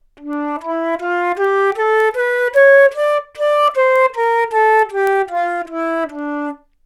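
A recording of sounds carries word clock ticks from 0.33 s to 6.75 s: sharp clicks of uneven strength at a steady rate of roughly one every 0.3 s, about twenty in all. The receiving device is running on its own clock rather than locking to the digital source, and the two differ by something like 70 ppm. Each time they slip by a sample, one sample is dropped or repeated, and that discontinuity is the tick.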